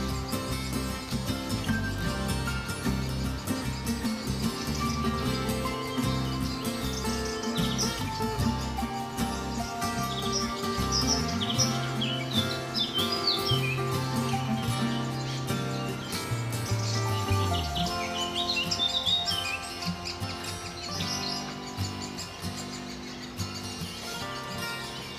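No technical faults can be heard anywhere.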